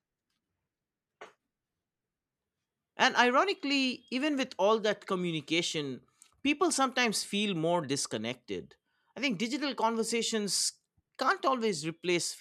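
Nothing in the speech stood out as a technical fault on listening.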